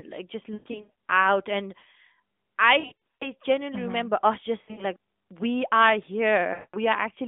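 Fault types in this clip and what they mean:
Lost AMR speech frames: the decoder covered missing frames by reusing its last pitch and vocal tract settings at falling gain, so bursts near 0.54, 2.8, 4.62 and 6.54 s warble and sag. The longest runs, up to 120 ms, fade toward silence. Spectrograms show frozen, fading harmonic streaks; waveforms show shrinking repeated cycles.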